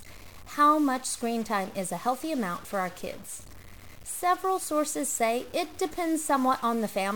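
A stuck bit, most likely a single data line or converter bit held at a fixed value, runs through the whole of this speech recording. Because that bit's weight sits at roughly 40 dB below full scale, about half of all samples land off by that step in a pattern that follows the waveform, so the voice carries a harsh, buzzy distortion throughout, and the pauses between phrases fill with a steady noise rather than falling silent.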